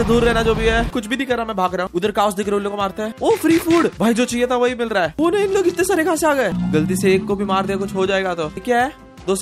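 No faults are audible anywhere in the clip.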